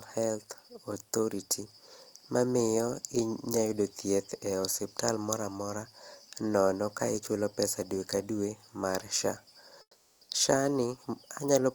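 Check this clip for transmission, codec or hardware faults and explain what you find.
One fault stands out, comfort noise in place of the background, from 9.81 to 10.29 s. For 480 ms the real background gives way to a steady, featureless hiss about 9 dB quieter, likely because the sender's discontinuous transmission stopped sending during the pause and the receiver synthesised noise. On a spectrogram the detailed background becomes a smooth, uniform band; the waveform shows a flat, lower-level stretch.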